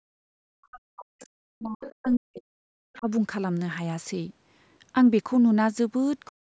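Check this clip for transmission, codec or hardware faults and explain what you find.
Two faults are present, both from a call's echo cancellation.

Speech suppressed in double talk: from 0.00 to 3.07 s, and again from 6.27 s to the end, the talker's speech dips, thins and breaks up, at its deepest about 40 dB down. The likely cause is the echo canceller failing to separate the talker from loudspeaker echo while both sides spoke, so it attenuated everything.

Other side's voice leaking through: faint scraps of a second voice appear at 1.86–1.95 s, 2.12–2.17 s and 2.93–2.98 s, roughly 20 to 30 dB below the talker. These are likely the far end's loudspeaker playback reaching the microphone, with the echo canceller leaving residue it did not remove.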